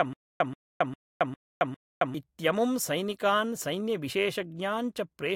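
Speech with stutter with silent gaps from 0.0 to 2.15 s: a 131 ms burst repeats five times every 403 ms, separated by 271 ms of digital silence, until "इत्यमुं सैनिकान्". It's likely a stalled stream replaying its last fragment, unlike dropouts, which never repeat audio.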